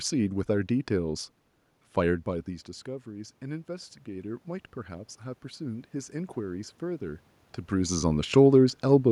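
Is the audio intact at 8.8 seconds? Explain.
Yes, the audio is intact at 8.8 seconds, with no dropout, distortion or other technical fault at that point.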